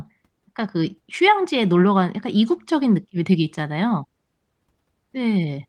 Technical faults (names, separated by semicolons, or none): none